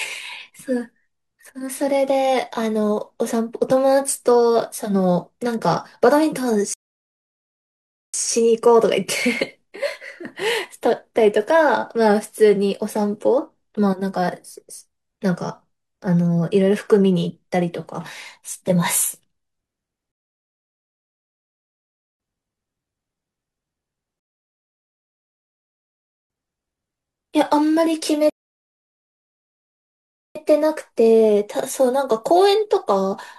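At 6.74 s the speech cuts to silence for about 1.4 s, then again at 20.12, 24.20 and 28.30 s for roughly 2.1 s each. These are rebuffering stalls: playback runs dry, waits for data, and picks up exactly where it left off.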